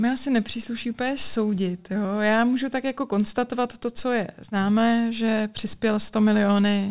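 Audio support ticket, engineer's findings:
Nothing stood out on listening to the speech, which comes over the call path with its expected narrowband sound and no content above about 4 kHz.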